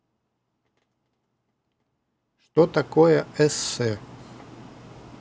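A speech clip with an audio dropout to a faint residue. The dropout is already under way when the clip begins and lasts until 2.57 s. Through that stretch the speech is almost gone. Only a faint leak remains, roughly 30 dB below its normal level. At 2.57 s the full signal snaps back abruptly, not like a fade-in. The likely cause is a break upstream in the wanted feed while the path after it stayed live.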